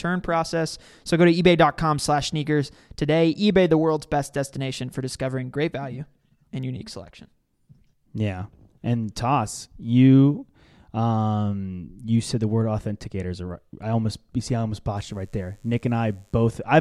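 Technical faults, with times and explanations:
14.97 to 16.47 s, mains buzz: right after "you see I almost", a steady, raspy buzz creeps in for a second and a half, sitting faint and well under the speech. It's built on 50 Hz mains. Something like a dimmer, a rectifier or a gap in shielding is letting sharp switching spikes through twice per cycle, and those spikes spray harmonics up into the kilohertz range. That's why it rasps rather than hums.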